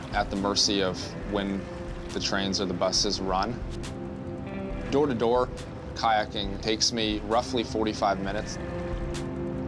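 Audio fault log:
No audible faults detected.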